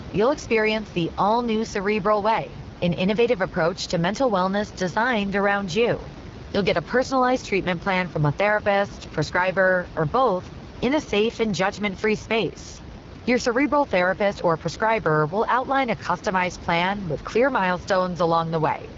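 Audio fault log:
Throughout, AMR wideband (HD Voice) codec: the speech has a plainly audible rough, raspy grain, and the band stops near 7.5 kHz, with the highest region filled by noise rather than detail. The codec rebuilds each sound from a pulse-excited vocal tract model and paints in its top band with shaped noise. The damage fits the codec's second-lowest rate, 8.85 kbit/s, where too few bits remain for that model. The room noise sits about 15 dB below the speech.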